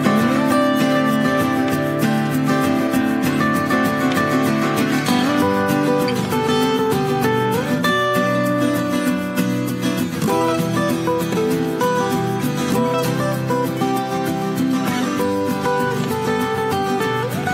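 No technical faults are audible anywhere in this audio.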